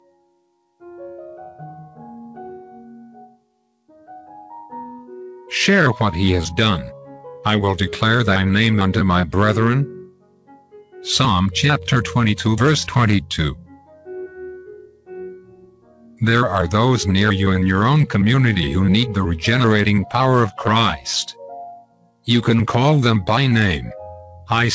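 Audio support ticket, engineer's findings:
Noise suppressor applied to music or sounds, whole clip. Level swings of around 10 dB as the suppressor treats sustained material and ambience as noise. Attacks pass, held tones and decays get pulled down, giving pumping and a thinned, fluttering texture. Probable component: speech-tuned noise suppression left active on non-speech audio.

Top band stops at 8 kHz, which fits the G.722 call codec at 64 kbps and the capture filtering on this path.

Sound cut by the noise suppressor, 0.00–0.83 s, 3.28–4.08 s, 10.05–11.06 s, 13.63–14.08 s, 14.67–15.12 s, 15.33–16.21 s, 21.8–22.28 s. Audible dips of about 15–18 dB, deepest about 18 dB. Steady or fading content is classified as noise and attenuated, so tails cut short and sustains sink. Affected stretches run half a second to a second each.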